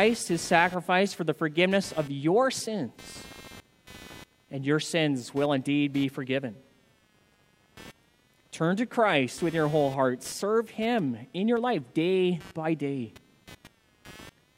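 Computer activity noise runs through the whole recording. A buzzing pulse near 200 Hz sits roughly 25 dB below the speech. It follows the computer's load, not the talker. Processor or graphics activity is shifting the shared ground of the audio circuit.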